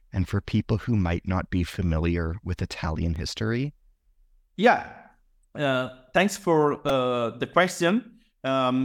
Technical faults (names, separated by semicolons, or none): repeated buffer